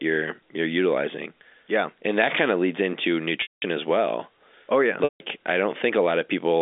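At 3.42 s, between "kind of leads into" and "as well", 200 ms of audio drops out; at 5.04 s a further 160 ms goes. Packet loss with pitch repetition: the last pitch period loops briefly, fades to silence, then audio cross-fades back in.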